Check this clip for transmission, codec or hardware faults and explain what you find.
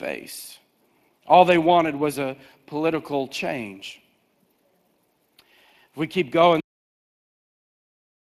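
Two faults are audible: Speex coding damage across the whole clip, and a cut-off end.

Speex codec, throughout: the speech carries a plainly audible grainy, hoarse texture, and nothing is present above 15.3 kHz. Speex's CELP model rebuilds the speech from a coarse excitation, and the degree of damage fits a bitrate around 22 kbps.

Cut-off end, at 6.60 s: right after "we keep going" the audio stops mid-sound and falls straight to digital silence with no decay, staying silent to the end. The final buffers were never written or played, so the sound is chopped off rather than fading out.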